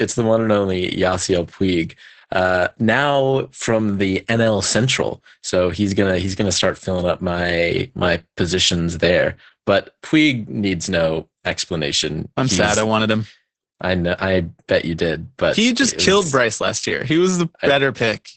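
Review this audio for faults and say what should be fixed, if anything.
The speech sounds muffled, hoarse and faintly robotic for the whole clip, with nothing above about 8.7 kHz. That is Opus voice compression at a very low bitrate, which sounds like about 10 kbps in SILK wideband mode, coding the excitation so coarsely that clarity is lost. To prevent it, encode at a higher Opus bitrate so the codec keeps more detail and bandwidth.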